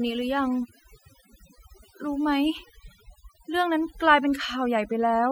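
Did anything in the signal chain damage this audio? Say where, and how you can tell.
Yes, overdone noise removal across the whole speech clip, at the processing stage. Gaps between phrases drop to near silence with twinkling specks. The suppressor was set too hard, gating bands near its noise estimate and taking quiet speech detail with them.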